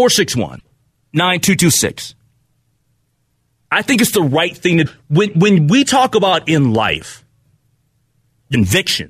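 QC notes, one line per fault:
0.56–0.61 s, 4.82–4.87 s, 8.51–8.55 s: damaged data in a compressed stream. Each is a brief chirp or blip of about 44 ms. Corrupted bytes there break the decoder's frame parsing, so it loses sync and must hunt for the next valid frame header.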